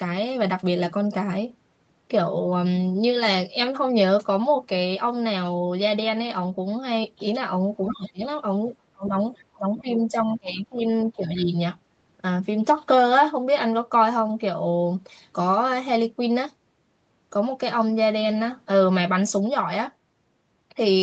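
From 7.83 to 8.12 s the other side's voice leaks through: a faint second voice, roughly 15 dB under the talker, sits beneath the speech. It is likely loudspeaker echo that the echo canceller failed to subtract from the microphone signal. On a spectrogram it appears as a weaker, separate set of harmonic lines interleaved with the talker's own. A shorter, much fainter scrap returns from 9.36 to 9.43 s, around 30 dB down, as a brief smudge of low-level energy.

Speech is suppressed in double talk from 7.9 to 8.24 s, overlapping that first leak, and again from 8.93 to 9.15 s, 9.55 to 10.81 s and 11.12 to 11.54 s. With both sides likely talking at once, the canceller turned everything down. The voice dips by up to about 20 dB in the first event, about 30 dB in the second, about 20 dB in the long third one and about 10 dB in the last. These show as sudden notches in the waveform envelope and darkened columns on the spectrogram. 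Throughout, the audio tops out at 8 kHz, consistent with the Opus call path at 32 kbps.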